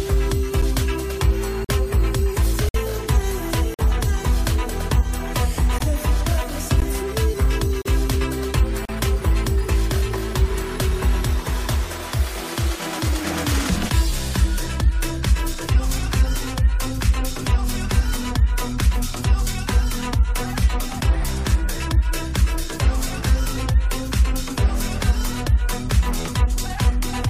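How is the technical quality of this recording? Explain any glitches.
The recording is interrupted by a recurring glitch: brief hard-edged dropouts to silence roughly once a second during the first nine seconds.

This is a gap between stream segments. The sound cuts out abruptly at 0.62 s, 1.65–1.69 s, 2.69–2.74 s, 3.74–3.79 s, 5.79–5.81 s, 6.80 s, 7.82–7.85 s and 8.85–8.89 s, each hole lasting between about 8 and 55 ms. The spacing points to 1-second segments whose time stamps don't quite meet, so the player inserts silence in the gap. Nothing is actually missing from the audio.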